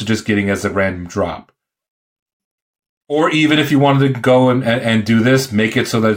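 No audible technical faults occur anywhere in the recording.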